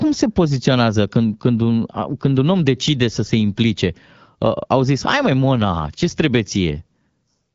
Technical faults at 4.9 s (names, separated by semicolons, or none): none